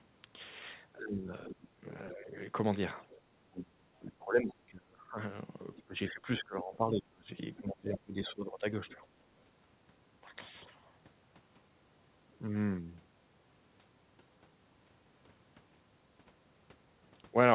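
From 0.97 to 2.35 s the speech dips in pieces by up to about 20 dB. This is likely speech suppressed in double talk: the echo canceller could not separate its own talker from the loudspeaker echo and turned both down together.

From 3.01 to 3.21 s a faint second voice comes through, about 25 dB below the speech. This is likely the other side's voice leaking through as loudspeaker echo the canceller missed.

From 3.39 to 5.17 s the same suppression returns, with dips of up to about 30 dB. Leakage comes through again from 5.75 to 6.1 s. A third suppressed stretch runs from 5.83 to 9.02 s, with dips of up to about 25 dB. A last scrap of leaked voice sounds from 8.89 to 8.95 s.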